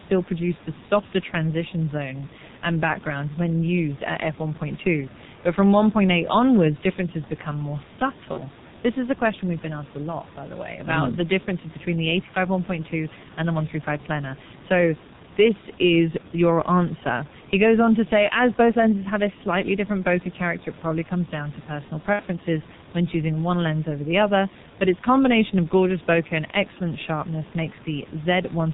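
Throughout, the heavily damaging G.723.1 codec, which fits its 6.3 kbit/s mode, discards everything above 4 kHz and updates its model slowly, leaving the speech muffled and hoarse with blurred consonants.

At 8.33 s, just after "onwards differences become more", there is VoIP packet loss concealed by the speech codec. The decoder extrapolates its last pitch and filter across a gap that fits one lost 30 ms frame, and the result is a brief, fading smear until about 8.41 s.

At 22.13 s, after "comes down to personal", the same concealment covers about 60 ms, which fits two lost frames, and the voice stays thin until 22.24 s.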